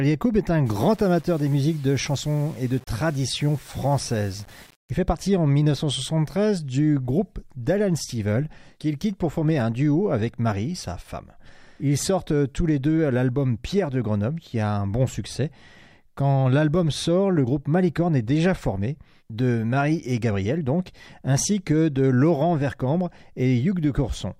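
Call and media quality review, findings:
Low bit depth without dither, 0.66 to 4.90 s. Probable component: a gain or format-conversion stage likely reducing samples to 7 bits by plain rounding, with no dither applied. Quantisation error tracks the signal, so the sound turns grainy and gritty, harshest on quiet passages, which break up or sputter between adjacent steps. The error sits roughly 30 dB below the signal and shifts with the material.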